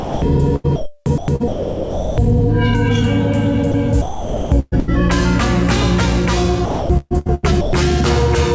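Right at the start, from 0.00 to 0.22 s, the sound is dropped by the voice detector. What should be there is swapped for a flat, steady comfort-noise hiss, most likely because the sender's detector judged the opening to be background and didn't transmit it. The same thing happens briefly at 3.72 to 3.74 s, where a 20 ms sliver goes missing and you get a tiny hiccup of synthetic noise.

The bigger problem is sound chopped by the voice detector, at 0.56 to 2.18 s, 4.02 to 4.90 s and 6.66 to 7.73 s. In each stretch the detector likely keeps toggling between sending and muting, so quieter bits and edges get clipped out and filled with comfort noise. Across those spans roughly 1.2 s, 0.7 s and 0.65 s is replaced. The result is a choppy, gated feel. All of this sits on the call codec's band limit, with nothing above 8 kHz.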